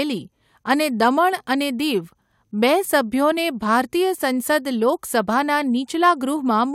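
No technical fault can be heard anywhere in the speech recording: the signal stays continuous and intact throughout.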